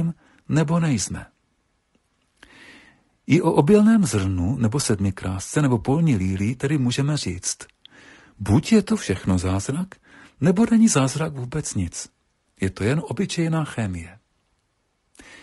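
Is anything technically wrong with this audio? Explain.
Yes, across the whole speech clip the voice sounds rough and grainy, with noise filling the gaps between harmonics and a thin, synthetic top end. That's likely low-delay AAC compression, whose short frames blur pitch harmonics, at a rate fitting roughly 32 kbps.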